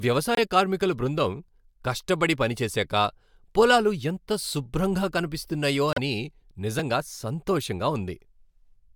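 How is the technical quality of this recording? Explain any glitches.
There are two brief glitches in the speech, both corrupt frame decoded. Around 0.35 to 0.39 s and again at 5.88 to 5.99 s, the decoder played frames with flipped bits. Misread gains and codes spray energy into the wrong frequencies, giving short squeaky blips that peak around -10 and -15 dBFS.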